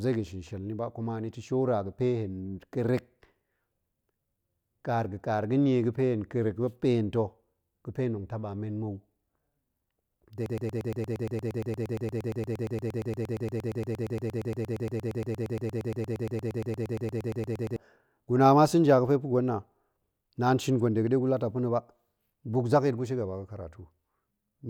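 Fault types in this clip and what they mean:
Broken-record loop: from 10.46 s to 17.76 s, a fragment of about 0.12 s of speech repeats exactly and back to back, 63 times, producing a rapid mechanical stutter of roughly nine cycles per second in place of continuing sound. The likely cause is a stall in the player, encoder or stream that kept resending the last fragment it held. The roughly 7.3 s of speech that should have played there is missing.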